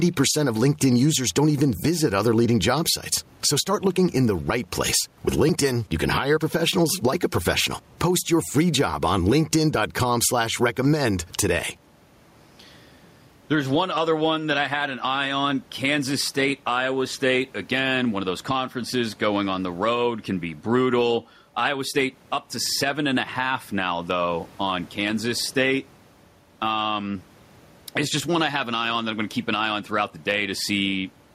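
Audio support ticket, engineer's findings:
Gain pumping, throughout. Room noise, about 41 dB under speech. Gain swinging around 10 dB. Likely mic gain too high, fast limiter catching peaks.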